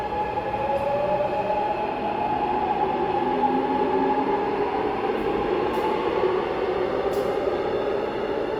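Across the whole clip the audio has a rough, grainy texture, with tonal parts dissolving into noise. This points to Opus compression, likely at around 24 kbps in its music mode. Unlike MP3 there is less swirling, as few spectral holes are left, and the top end still reaches about 20.1 kHz.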